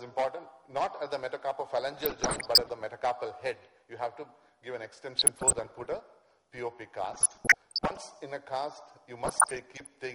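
Weak DAB reception lets bit errors slip past error correction into the MP2 audio data. Corrupted samples put short blips of noise in single sub-bands, and corrupted scale factors make sub-bands leap in level for up to a frame. The result is DAB burbling, heard at 1.98 to 2.72 s (error rate around 1 percent, the harshest), 5.15 to 6.03 s and 7.00 to 7.98 s (around half a percent each), and 9.25 to 9.94 s (around 0.7 percent).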